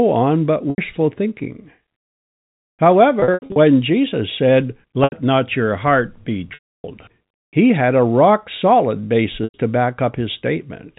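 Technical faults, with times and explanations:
0.70–0.78, 3.20–3.56, 5.04–5.12, 6.54–6.84 and 9.44–9.54 s: packet loss with pitch repetition. Lost packets were covered by looping the last pitch period, so the 80 to 100 ms gaps sound like a brief, buzzy held tone. At 3.20–3.56 s about 220 ms of short dropouts, none longer than 80 ms, are scattered across 360 ms. The 300 ms loss after "not your heart be" fades toward silence before the audio resumes.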